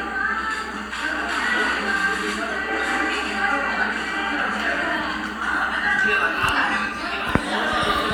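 Everyday sounds, with no technical faults to be heard.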